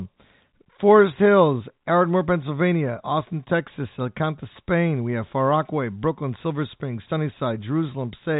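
No technical faults are audible.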